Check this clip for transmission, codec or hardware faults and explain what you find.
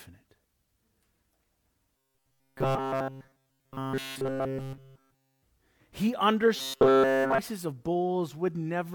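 Two kinds of fault are present: a robotic buzz over two stretches of the speech, and two short bursts of damaged data in a compressed stream, each falling inside one of the buzzing stretches.

Robotic sound from repeated short buffers occurs from 1.97 to 5.43 s and again from 6.57 to 7.39 s. The speech becomes a rigid metallic buzz at 134 Hz, which fits a buffer of about 7.5 ms. The likely cause is that the playback side repeats that buffer in place of late audio, with essentially all of the sound in these spans replaced.

Damaged data in a compressed stream appears at 4.55 to 4.60 s and at 7.20 to 7.26 s, about 50 and 57 ms long. Corrupted bytes make the decoder misread frames and lose sync until it finds the next valid header. Each event is heard as a brief chirp, squawk, click or short hole within the buzz.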